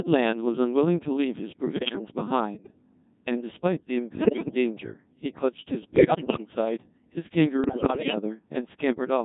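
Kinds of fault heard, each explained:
Codec 2 vocoder: Throughout, the speech is rebuilt from pitch, voicing, energy and a spectral envelope using sine-wave synthesis, so it sounds robotic and buzzy with heavy damage, which fits a mode near 1.6 kbit/s. Unlike ordinary lossy codecs, no real waveform detail survives.
bit errors on digital voice radio: At 1.76–2.01 s, 4.20–4.55 s, 5.96–6.54 s and 7.64–8.16 s, around 15% of bits in the first two bursts and 10% in the last two corrupt the frame parameters. The voice lurches in pitch, level and tone, breaking into bleeps and warbling gibberish rather than falling silent as a dropout would.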